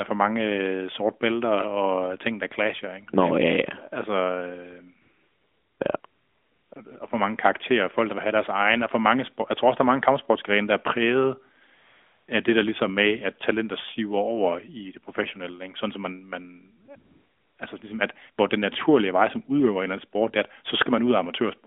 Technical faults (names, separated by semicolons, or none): AMR comfort noise